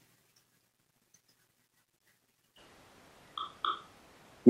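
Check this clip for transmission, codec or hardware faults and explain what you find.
One fault appears: a switch to a distant microphone at 2.59 s, lasting to the end. The speech abruptly turns roomy and hollow, drops roughly 15 dB, and loses bass, likely because the close microphone's feed failed and a far-off one took over. The waveform shrinks suddenly, and the spectrogram shows thinned low frequencies with reverberant smearing and a noise floor around 35 dB below the speech.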